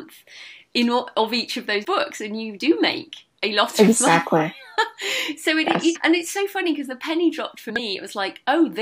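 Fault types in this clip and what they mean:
Compressed frames skipped: the sound jumps forward three times, at 1.84 s, 5.95 s and between 7.69 and 7.80 s, losing roughly 70 ms, 150 ms and 100 ms of material. Whole blocks of the encoded stream were never decoded, either missing from the file or rejected as corrupt.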